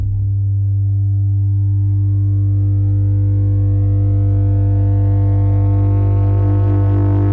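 Nothing stood out on listening to this music, which reaches the ear through a call path whose content stops at 8 kHz, as fits a wideband codec such as G.722.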